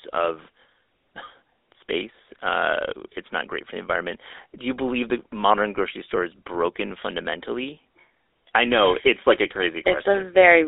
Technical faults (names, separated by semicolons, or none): GSM full-rate codec